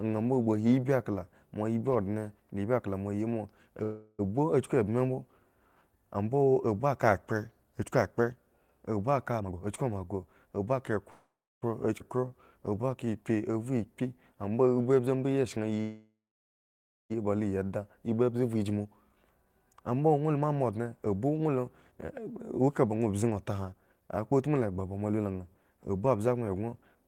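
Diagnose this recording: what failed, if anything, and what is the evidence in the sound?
Call audio freeze at 3.83–4.21 s, 11.10–11.64 s and 15.81–17.12 s, a network/jitter-buffer fault. After "akla moa yi moa" the last sound is stretched for 0.35 s before "a chku" resumes. The later gaps last 0.52 s and 1.29 s and fade to silence for about 0.29 s and 0.93 s. The likely cause is delayed packets emptying the buffer, with nothing lost.

Jitter buffer speed-up at 9.39–10.97 s and 14.77–27.03 s, in the receiver's buffer. The sound runs faster at unchanged pitch, at 122% and then 109%. Pitch-period slices are trimmed repeatedly to shed excess delay, roughly 0.4 s in the first stretch and around a second in the second.

Skip ahead at 12.00–12.02 s, in the network/jitter buffer. Playback jumps forward with almost no gap. About 0.15 s of audio was discarded while later audio was already queued, so the two sides of the cut are joined nearly directly.

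Jitter buffer slow-down at 12.17–13.78 s, in the receiver's buffer. The sound is drawn out to 91% speed at the same pitch. Single pitch periods are repeated in quick succession, adding 156 ms, to rebuild the reserve.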